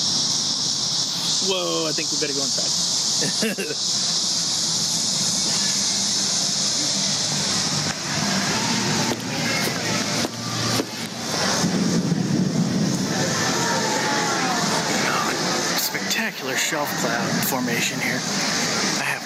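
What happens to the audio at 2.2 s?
At 2.2 s the audio is caught in gain pumping, which runs through the whole clip rather than starting there. The level rises during gaps and ducks under each loud sound, with the background swelling and sinking by around 15 dB. The likely cause is input gain set far too high, with a fast limiter or compressor clamping down on every loud moment. Unlike a noise gate, which cuts the background off in the gaps, pumping lifts it there.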